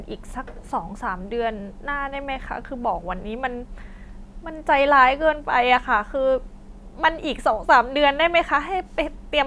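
No technical faults can be heard anywhere in the speech, so there is nothing to describe in time order.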